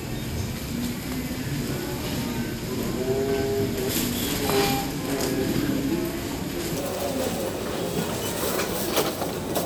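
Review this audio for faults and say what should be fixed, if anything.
From 0.00 to 6.76 s the sound drags slow and deep, roughly ten semitones low: a section at the wrong speed (0.615×), likely a clock mismatch. Confirm that the sample rate of every source matches the project and playback settings before editing or rendering.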